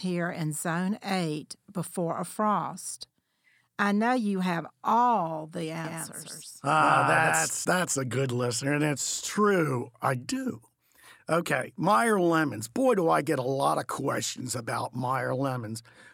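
A doubled audio track runs from 5.85 to 7.65 s, between "you have all the" and "that's a good listener". A second full-band copy of the speech trails by about 150 ms, roughly 5 dB quieter and with no room decay, and it starts and stops abruptly. The likely cause is a slower second capture path or an out-of-step edit.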